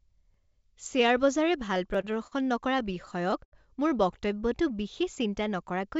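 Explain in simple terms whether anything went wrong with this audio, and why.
Twice the playback device ran out of fresh audio and played its last small chunk over again, a fault called a repeated buffer. It happens at 0.34 s and at 1.95 s. The repeated piece lasts only about 6 ms, which fits a 256-sample buffer, so instead of an obvious echo you hear a quick click or tiny buzz where the copy is joined on. Essentially nothing of the speech is lost.

The bigger problem is repeated stalls (stutter). Network packets kept arriving late, so the receiver's waiting store emptied over and over. Each time, it stretched the last bit of sound until new audio came. This happens four times between 1.74 and 2.33 s, the longest wait about 42 ms, and six times between 2.79 and 3.54 s, the longest about 78 ms. No speech goes missing, but it drags and stumbles in those stretches.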